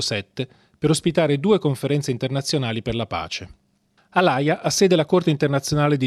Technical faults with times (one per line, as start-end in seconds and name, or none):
none